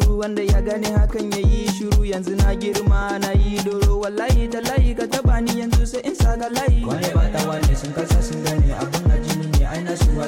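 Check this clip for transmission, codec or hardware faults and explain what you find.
No transmission, codec or hardware faults can be heard here.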